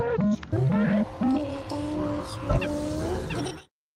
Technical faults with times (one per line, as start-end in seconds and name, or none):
none